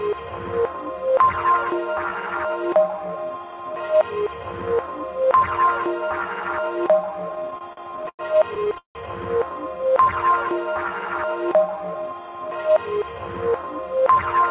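From about 7.32 to 8.97 s the sound hits a run of repeated stalls (stutter). The jitter buffer kept running dry, so the receiver stretched the last bit of audio, about 19 times, the longest for around 170 ms, fading it during the longer waits. Roughly a third of that stretch is filled-in sound, but nothing is actually lost; it just drags and hiccups. All of this is heard through a call path capped at 4 kHz, which fits G.711 mu-law.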